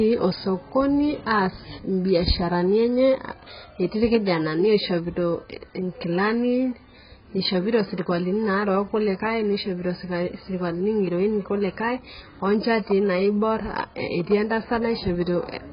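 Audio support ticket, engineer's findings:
Dull, muffled speech throughout, nothing above about 5.1 kHz; smeared, fizzy texture on sibilants and sustained sounds. Likely AAC compression, heavy: low-bitrate encoder cutting bandwidth and starving bands, which fits AAC-LC at around 12 kbps.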